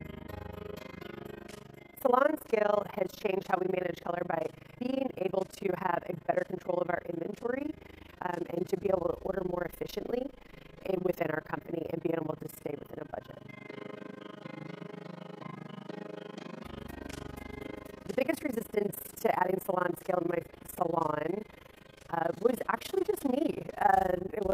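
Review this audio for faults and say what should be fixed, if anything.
Overlap-add ripple runs through the whole clip: the level swings by about 60 dB at a rate of around 30 Hz, giving a harsh flutter. Windowed frames were recombined with an overlap whose summed gain is not constant, so the level rises and falls once per frame. To prevent it, choose a window and hop size that meet the constant-overlap-add condition, or normalise by the summed window.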